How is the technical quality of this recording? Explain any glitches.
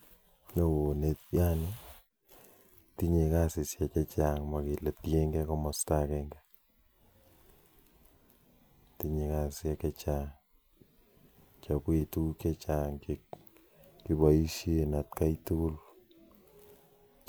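Nothing here glitches; the recording holds together fine, with nothing technical to point out anywhere in it.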